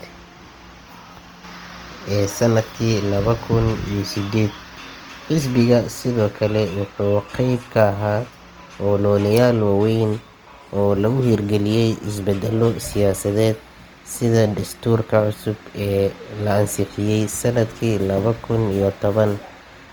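Throughout the speech, Opus compression is likely. Filled-in bands make the sound rough and grainy rather than swirly. This fits a low bitrate near 24 kbps.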